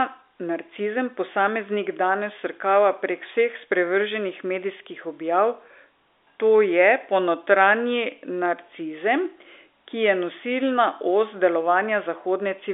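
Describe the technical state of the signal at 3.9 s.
At 3.9 s the speech is intact, heard through the ordinary narrow telephone band of G.711 telephone coding with no fault at that moment.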